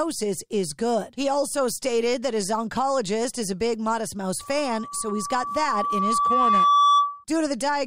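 At 4.40 s a loudspeaker feedback squeal kicks in and runs to 7.24 s. The mic is hearing its own speaker, and at 1.2 kHz the loop gain tips past one, so a pure tone swells over a few seconds until it sits roughly 10 dB above the speech.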